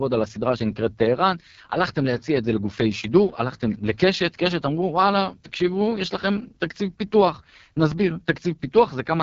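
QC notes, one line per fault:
Throughout: AMR wideband (HD Voice) codec, heavily damaged. The speech is rough and raspy, with nothing above about 7.3 kHz. That fits the codec's lowest mode, likely around 6.6 kbit/s, where the pulse-driven vocal tract model gets too few bits and the top band is just shaped noise.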